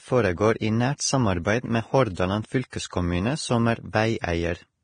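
Speech throughout carries heavy codec damage, likely from low-bitrate Vorbis compression at around 24 kbps: the audio sounds hissy and grainy with roughened tones, and a spectrogram shows a hard ceiling near 9.7 kHz with blotchy, noise-like treble beneath it. At 2.70 to 2.73 s there is pre-echo: a short hiss smears about 26 ms ahead of a sharp onset, softening its attack, visible on the waveform as a low fuzzy ramp before the transient rather than a clean rise.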